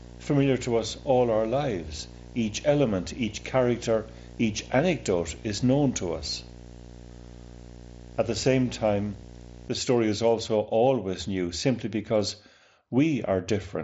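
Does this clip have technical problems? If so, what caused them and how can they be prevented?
Yes. A display or video cable coupled into the audio, causing video or display buzz from 0.0 to 9.69 s: a 60 Hz field-rate buzz with hash, roughly 20 dB below the speech. Route audio lines away from screens and video cables, and use shielded, balanced connections.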